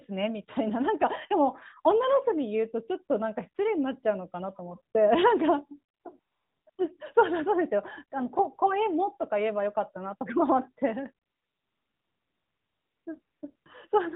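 A steady, smooth hiss replaces the real background in short switched pauses at 5.94–6.04, 6.20–6.66 and 6.70–6.78 s, then for 1.8 s at 11.26–13.06 s, and again at 13.22–13.42 and 13.56–13.66 s. This is AMR comfort noise: during detected silence the phone stopped sending speech frames, and the receiver synthesised noise from a coarse level-and-spectrum description.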